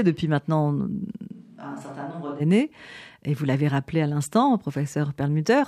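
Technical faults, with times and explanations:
1.33–2.39 s, switch to a distant microphone: after "depuis maintenant euh" the speech suddenly turns roomy, hollow and bass-light, about 10 dB quieter with audible room noise, then snaps back, likely from the close microphone dropping out.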